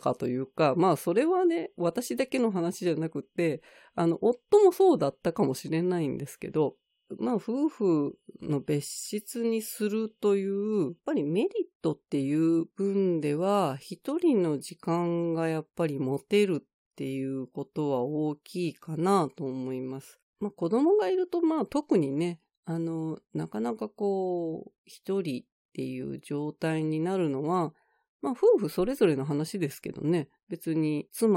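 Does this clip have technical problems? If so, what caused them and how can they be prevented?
No, I hear no technical faults in this speech recording, so there is nothing to trace or prevent.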